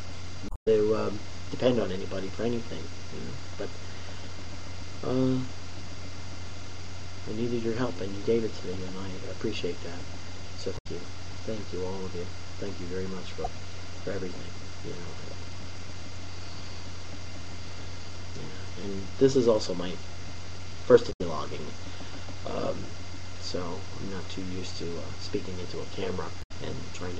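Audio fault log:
0.46–0.68 s, 10.75–10.87 s, 13.44–13.47 s, 21.09–21.21 s and 26.39–26.51 s: damaged data in a compressed stream. Each is a short chirp or blip where corrupted bytes make the decoder misread the frames, lose sync, and hunt for the next valid frame header.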